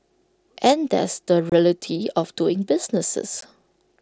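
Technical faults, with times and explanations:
1.50–1.52 s and 3.41 s, unconcealed Bluetooth headset packet loss: headset-to-phone voice packets were lost and nothing filled the gaps, leaving abrupt silent holes of 22.5 ms and 15 ms in the speech.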